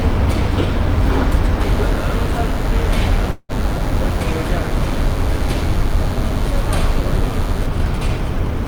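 From 1.61 to 7.66 s, a thin, steady buzz at 100 Hz with many harmonics sits roughly 25 dB under the sound. This is DECT cordless phone buzz: the audio circuitry rectifies a nearby handset's 10 ms radio bursts.

From 3.31 to 3.52 s, the last sound is stretched out and fades, followed by a brief silence. It resumes with about 0.18 s gone, likely a long network dropout concealed by the receiver.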